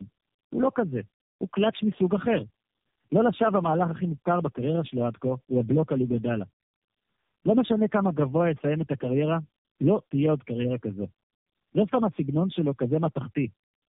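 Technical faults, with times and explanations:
Throughout, tandem speech coding: the speech sounds like it has been squeezed through low-rate coders about three times in a row, each decoding and re-encoding what the last one already mangled. The damage stacks up, so it comes out rougher, duller and more warbly than any single codec would leave it. There's nothing above about 3.8 kHz, which fits narrowband telephone codecs, and the final stage sounds like an AMR-type coder.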